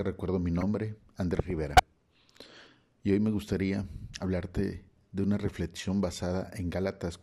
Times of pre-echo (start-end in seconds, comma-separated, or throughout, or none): none